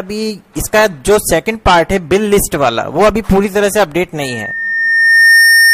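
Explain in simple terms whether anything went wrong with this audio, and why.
At 4.22 s a steady whistle appears, swells over about a second and keeps shrieking, louder than the sound itself, until the clip ends. This is loudspeaker feedback squeal: the microphone heard its own speaker, and the loop kept amplifying one tone near 1.8 kHz.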